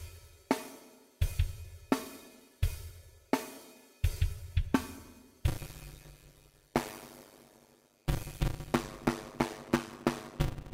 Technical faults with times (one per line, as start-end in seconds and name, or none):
5.47-10.73 block size mismatch (padded)